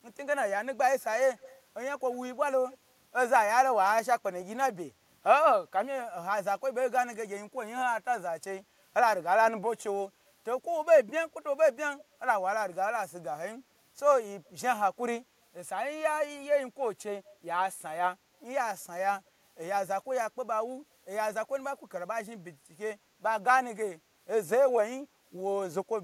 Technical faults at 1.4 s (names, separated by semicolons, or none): echo leak